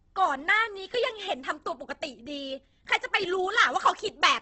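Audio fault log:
throughout Opus compression: the speech sounds heavily rough and grainy rather than swirly, with nothing above 8.2 kHz. That points to the encoder's music mode at a low bitrate near 12 kbps, likely Opus filling starved bands with folded lower bands or noise.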